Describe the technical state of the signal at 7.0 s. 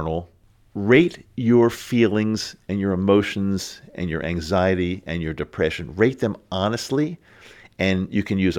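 At 7.0 s the speech signal is intact, with no audible fault at that moment.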